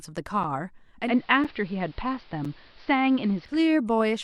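At 0.43 s the speech drops out for a tiny, hard-edged hole of about 6.5 ms, and the same break recurs at 1.44, 2.45 and 3.45 s, almost exactly one second apart. This is a gap between chunks. The audio was delivered in one-second blocks, and a short stretch of silence sits at each join. Nothing is lost, but the flow is cut at every boundary.

From 1.00 s to 3.61 s the sound turns duller and grainier. A low bed of hiss comes up, about 30 dB under the speech. The treble is cut, and the level shifts by about 1 dB. This is digital radio blending to analogue. The receiver lost its digital stream and cross-faded over about 140 ms to the station's AM broadcast, which is band-limited and noisier, then faded back at 3.61 s. The one-second chunk gaps continue through this stretch.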